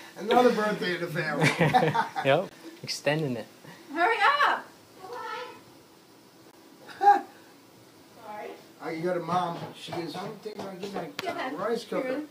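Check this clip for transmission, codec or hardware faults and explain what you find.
The clip has one kind of fault, a gap between chunks, occurring three times at 2.49–2.51 s, 6.51–6.53 s and 10.53–10.55 s.

The audio comes in 4.0 s blocks with 20 ms of silence at each join, so the sound cuts out abruptly and resumes. The waveform shows flat, square-edged holes, and the spectrogram shows thin blank vertical stripes spanning all frequencies.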